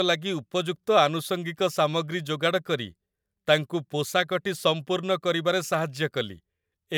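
No technical faults can be heard anywhere in the recording.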